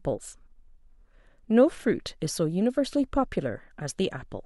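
A speech recording with no technical fault to be heard anywhere in it. Nothing in the signal calls for a time stamp or a cause.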